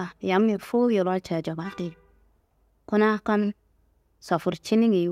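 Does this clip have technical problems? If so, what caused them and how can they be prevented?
No, nothing stood out as a technical problem on listening to this speech clip, so there is nothing here that needs preventing.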